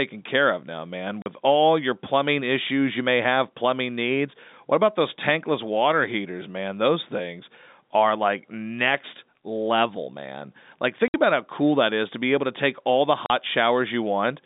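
Packets went missing on the way to the receiver, which played silence in their place, so this speech clip over a G.711 telephone line (band roughly 200 Hz to 3.7 kHz) is cut by packet loss filled with silence: a 40 ms hole at 1.22 s between "care of now man" and "all your plumbing issues", a 60 ms hole at 11.08 s just before "about how cool that", and another 40 ms at 13.26 s after "to take all the". The lengths fit whole 20 ms packets, and each gap starts and stops abruptly.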